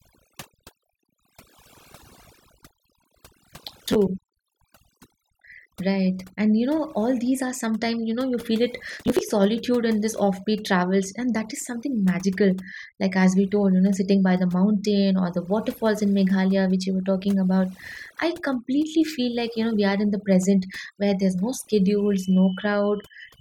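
Throughout this speech recording the voice sits over a near-silent background flecked with twinkling specks, the mark of overdone noise removal. A noise reducer set too aggressively has pushed individual frequency bands down whenever they came close to its noise estimate, taking the quieter parts of the voice with them. Processor overload crackle appears as brief gritty tearing from 3.86 to 3.96 s, and again, longer, from 8.93 to 9.21 s, between "know you feel it" and "solitude in this offbeat". In each burst the processor failed to finish a run of short buffers in time, and each missed buffer was simply skipped, leaving hard-edged gaps. The spacing of the gaps fits buffers of around ten milliseconds, with many missed in a row each time.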